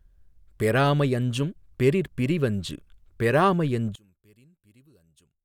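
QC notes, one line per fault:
3.95–5.44 s, one channel inverted: just after "யஞ்சும் பெறிற்பிரி வஞ்சு பெறாஅமை", the mono sum drops by about 32 dB to a faint residue, likely from reversed polarity on one channel cancelling the shared centre. The waveform collapses to near-flat and the spectrogram fades across all bands.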